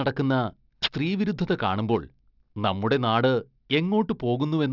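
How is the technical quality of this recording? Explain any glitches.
The recording has a technical fault that runs through the whole speech clip. Aliasing, present throughout: the audio fits a reduction to 12 kHz without a low-pass filter, so content above 6 kHz folds back down, leaving sibilants gritty and metallic, roughly 15 dB below the speech.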